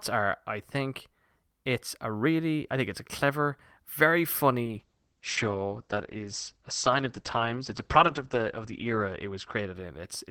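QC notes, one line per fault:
4.64–10.30 s call bitrate drop: speech turns coarse and muffled, highs cut above 8 kHz, consistent with the encoder falling from about 64 to 9 kbps.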